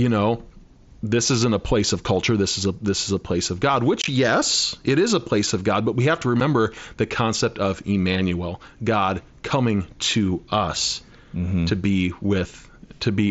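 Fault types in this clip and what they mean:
Unconcealed Bluetooth headset packet loss: at 4.02–4.08 s and 6.40 s, voice packets dropped between headset and phone were replaced by silence or an idle pattern, leaving abrupt holes in the speech.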